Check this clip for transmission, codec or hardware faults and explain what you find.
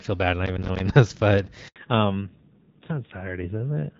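Three faults are audible: a burst of crackle early on, a short dropout partway through, and a drop in audio bandwidth that lasts to the end.

Processor overload crackle, 0.46 to 0.80 s, just after "bad not". The device could not finish its audio buffers in time, and around ten deadlines were missed in close succession. Each miss left a brief hole of silence with abrupt edges. The spacing of the holes fits buffers of about 10 ms. Together they produce a gritty, tearing crackle over the speech, which clears once the load eases.

Handover gap, 1.68 to 1.76 s, right after "this but". The call was switched from one network link to another, and no speech frames came through during the switch. The voice fades out quickly and leaves 80 ms of silence until the new link begins carrying audio. Anything spoken in that window is missing.

Fallback to narrowband, from 1.76 s to the end, starting at the same handover. 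Before this point the call ran on the AMR wideband (HD Voice) codec with only light coding damage. After the switch the sound points to a narrowband AMR mode at a low rate, around 7.4 kbit/s. All content above 4 kHz disappears, so the voice sounds muffled and duller, and it picks up a rougher, more coded texture.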